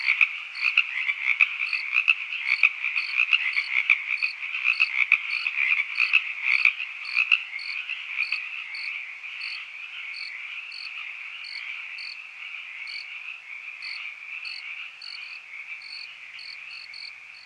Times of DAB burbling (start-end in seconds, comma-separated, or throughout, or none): none